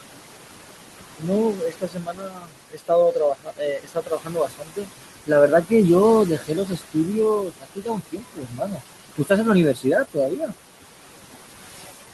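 A speech recording over a call path shows noise suppressor artifacts throughout. The room noise, sitting about 11 dB below the speech, is pulled down by about 17 dB in the gaps and swells back under the talking. That pumping, tied to when speech starts and stops, is what separates it from a steady hiss or a codec's coding noise. Speech cut by the noise suppressor occurs at 1.19–4.89 s (around three seconds affected, dipping by up to about 19 dB), 6.38–6.96 s (about 16 dB), 7.46–8.82 s (about 18 dB) and 9.74–10.53 s (about 12 dB). Here the suppressor mistook quieter stretches of speech for noise, so parts sound swallowed or faded rather than cut cleanly. Dropouts would instead leave abrupt silences. Above 12 kHz nothing comes through, which matches the call codec's band limit.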